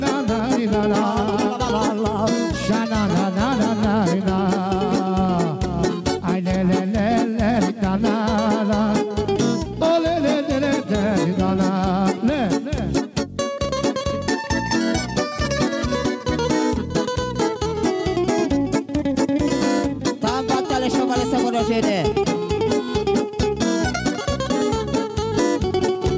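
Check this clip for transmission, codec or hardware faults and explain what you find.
One fault runs through the whole clip: gain pumping. The likely cause is an input gain set far too high for the microphone, so a fast limiter or compressor has to clamp down on every loud sound and then let go. The level swings by around 10 dB, so loud and soft passages sit unnaturally close together and the sound comes across as squashed. The missing content above 8 kHz fits a G.722 wideband call path and is not a fault.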